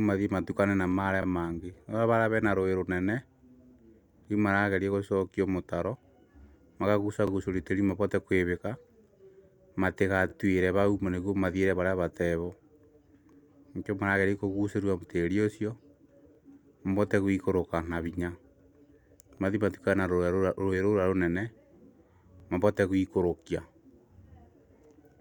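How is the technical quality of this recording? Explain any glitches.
The speech has one recurring glitch, overlapping chunks, heard at 1.23, 4.25 (just before "rĩu maragerio gũcokio mũtaro"), 7.28, 10.3, 13.33, 16.35, 19.38 and 22.4 s (just before "mabote gũikũrũkia"). Each 3-second chunk begins 25 ms early, so that slice repeats, producing a regular click-like stutter.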